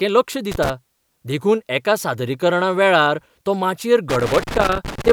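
A worn or dirty contact in the signal path is making and breaking as it shifts, producing loose connector crackle in this speech clip: irregular scratchy bursts from 0.52 to 0.70 s, and again from 4.10 to 5.11 s, just after "सादरीकरणा वेळार तो माचयेर".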